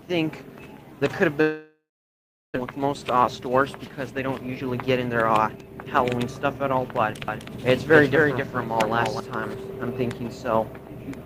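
A long network dropout runs from 1.41 to 2.58 s. Once the audio stops arriving, the last sound is stretched into a fading buzz before about 0.72 s of silence. Playback then resumes with roughly 0.6 s missing, likely because packets were lost.

A jitter buffer speed-up follows from 2.66 to 6.92 s. The receiver snips out tiny pitch-period slices again and again, trimming about half a second of built-up delay. The sound plays at 112% speed without any pitch change, so it comes across as rushed.

A doubled audio track appears from 7.28 to 9.20 s. A second full-band copy about 5 dB quieter trails the original by roughly 300 ms, with no decay or room colouring. It starts and stops abruptly, which points to a second capture path.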